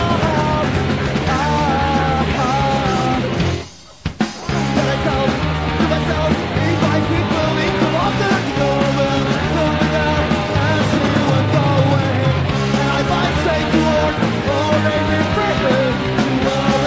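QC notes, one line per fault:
No faults found on listening; nothing to log.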